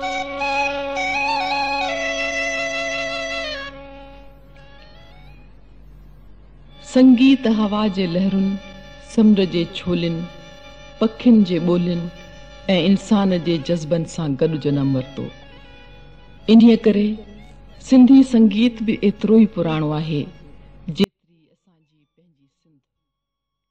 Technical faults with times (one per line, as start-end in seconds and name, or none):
21.04-23.70 audio dropout to a faint residue